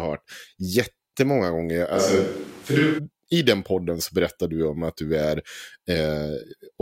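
Speech clip. From 1.96 to 2.97 s, the voice turns suddenly roomy and hollow, with thinner bass, likely a switch to a distant microphone. Level stays similar; room noise sits about 25 dB down.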